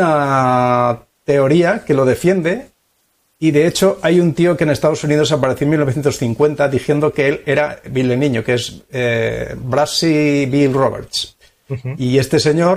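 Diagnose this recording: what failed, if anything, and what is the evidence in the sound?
Listening through the recording, nothing stood out as a failure at any stage of the chain.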